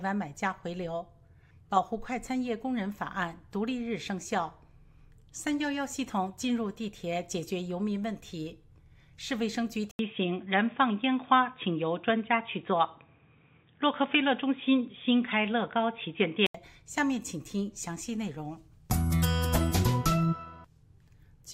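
At 9.91 s the input likely switched to a poorer device, leaving a silence of 80 ms. Until 16.55 s the sound turns dull and boxy with nothing above 3.8 kHz, shifts in level by roughly 5 dB, and carries a faint new noise floor.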